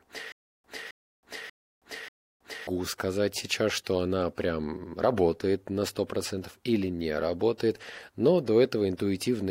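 Speech clip with a stutter with silent gaps from 0.32 to 2.67 s: a 267 ms fragment repeats four times, each followed by 321 ms of digital silence, before "сказать сейчас что она", likely a stalled stream replaying its last buffer.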